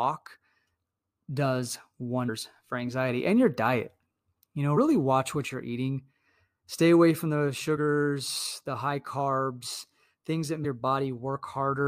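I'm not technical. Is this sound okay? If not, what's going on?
No. Damaged data in a compressed stream causes brief blips at 2.28, 4.76, 7.76 and 10.64 seconds, where corrupted stored speech makes the player stumble and lose its place.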